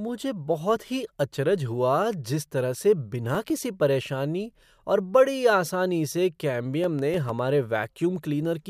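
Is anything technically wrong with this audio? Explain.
Yes, there are CD scratch ticks. A blemish on the disc surface wipes out more data than the error correction can rebuild on each rotation, so the player patches or mutes those samples. In this speech clip that gives two bursts of regular ticks: eleven between 2.60 and 4.10 s, and seven between 6.54 and 7.44 s, roughly seven or eight a second. Each is a tiny click or dropout only a few milliseconds long.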